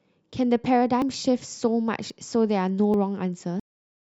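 Speech, with the capture side likely failing to collect its buffers before the hardware overwrote them, a dropped buffer (overrun) at three points. Each time a stretch of audio is lost and the two sides are spliced together with no gap, so the speech jumps forward: at 1.02 s roughly 40 ms goes missing, and at 2.10 s and 2.94 s around 20 ms each. The recording also has a cut-off end, because the final buffers were never written out. At 3.60 s the speech stops mid-sound and falls straight to digital silence with no natural decay, leaving an abrupt, truncated ending.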